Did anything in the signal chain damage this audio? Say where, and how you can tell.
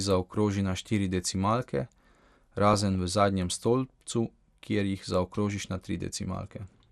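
Yes. At the codec stage the speech has likely passed through MP2 compression at a low rate, with dullness that fits roughly 80 kbps. Too few bits reach the 32 sub-bands, so the upper bands drop out and flicker while the rest are coarsely quantised. Throughout the clip the top end sounds dull, with a gurgling, granular roughness on the speech, familiar from low-rate digital radio.

The second fault is at the reception or transmission stage: DAB burbling at 2.67 to 2.95 s and again at 5.50 to 5.87 s. Weak reception let bit errors, around a few in a thousand, slip past error correction into the MP2 stream, corrupting samples across a short run of frames. Wrong samples put short blips of noise into single sub-bands, which you hear as burbling over the speech.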